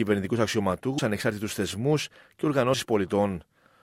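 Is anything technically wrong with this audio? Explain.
Yes. At 0.97 s and again at 2.73 s the sound lurches forward with a short, smeared blip rather than a sharp click, as if a sliver of time has vanished. These are compressed frames skipped: whole blocks of the encoded audio never reached the output, so playback jumps ahead. The gaps sound like roughly 100 ms and 50 ms, which fits several 24 ms frames and then two. Overlapping frames soften each join.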